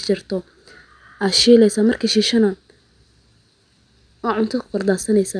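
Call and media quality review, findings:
No faults found in this recording.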